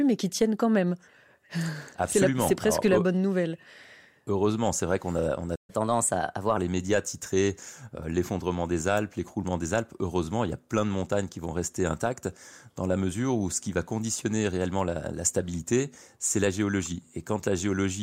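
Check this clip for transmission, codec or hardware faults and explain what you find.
Two playback faults in this speech clip, back to back, right around the six-second mark.

At 5.55 s there's a playback stall: the speech cuts out mid-flow for about 130 ms, until 5.70 s. The player most likely ran dry of data or had its thread blocked, so the output just went silent until it recovered.

Straight after, from 5.70 to 6.57 s, comes catch-up at higher speed. The player chews through its backlog by resampling at 1.15 times normal speed, so the talking sounds rushed and sits about two semitones sharp before settling back to normal pitch and pace.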